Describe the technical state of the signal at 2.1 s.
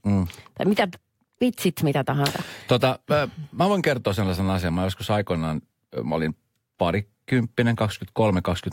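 At 2.1 s the speech signal is intact, with no audible dropout, distortion, or other fault at that moment.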